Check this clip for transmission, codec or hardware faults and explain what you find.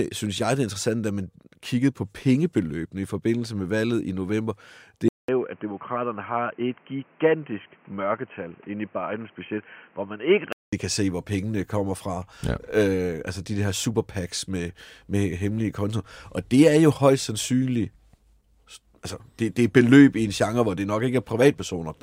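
One fault is present. From 5.08 to 10.73 s the speech turns dull and boxy. It starts with a 200 ms silence, then nothing above 3.2 kHz, a slightly lower level and a faint new noise floor. This is likely an input switched to a poorer device, whose narrower band lasts until the original input returns.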